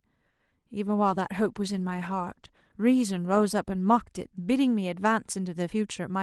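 Speech sent over a WebRTC call path using Opus, where the start carries a short stall from a late packet. From 0.30 to 0.40 s the sound is held too long, with a slight buzz or dip. A packet arrived late and the jitter buffer ran dry. The receiver stretched the last sound for 90 ms, then resumed at the same point. No audio is lost, but everything after it lands 90 ms later. Short concealed packet loss follows twice, at 0.45 to 0.60 s and at 0.50 to 0.52 s. Each time 10 ms of audio never reached the decoder in time. The receiver patched the gap by continuing the preceding sound and blending back into the real signal. This leaves a brief smear or wobble rather than a clean gap, and a very short consonant could be lost inside it. A call bitrate drop begins at 0.87 s and runs to the end. The call's bandwidth estimate fell, and the encoder went from 64 kbps down to 18 kbps, staying at the lowest rate for 2.12 s. 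With far fewer bits, Opus codes the speech more coarsely. The sound turns rougher and more watery than in the first stretch, which was coded at the full 64 kbps with a 12 kHz band.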